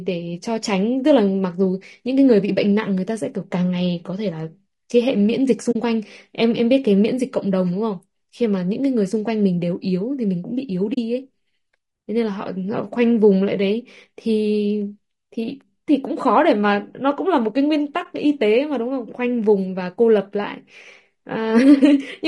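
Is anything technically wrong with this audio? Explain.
Yes, two things. The whole clip has plainly audible compression damage, likely low-delay AAC compression such as AAC-ELD. Its short frames don't resolve the speech harmonics well, so the voice comes out rough and grainy, with noise between the harmonics. That fits a bitrate around 32 kbps.

There's also AAC frame loss with muting at 5.71 to 5.76 s, 10.93 to 10.98 s and 18.03 to 18.06 s. Lost frames decode as silence, and the overlapping windows fade the sound out and back in, leaving short soft-edged holes at the first two and a brief dip at the third.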